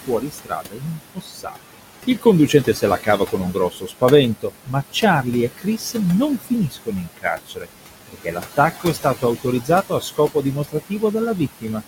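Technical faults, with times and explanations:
Throughout, noise suppressor artifacts: the suppressor pulls down every band it judges to be steady background by about 17 dB, deciding frame by frame. The room noise, sitting about 11 dB under the speech, therefore drops away in the pauses and swells back up beneath each phrase.
0.07–1.75 s, 2.21–4.02 s, 4.41–5.26 s, 5.57–5.96 s, 6.38–7.68 s, 8.07–11.03 s and 11.37–11.82 s, speech cut by the noise suppressor: in each stretch the suppressor mistakes quieter parts of the speech for background and turns them down with it, by up to about 14 to 18 dB. Soft consonants and word endings come out faint or swallowed, most of all in the first stretch, where around a second of speech is affected. Later stretches lose less, from about 0.7 s down to about 0.1 s near the end.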